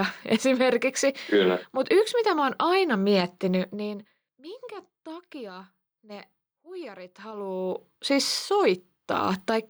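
No technical faults can be heard anywhere in the speech.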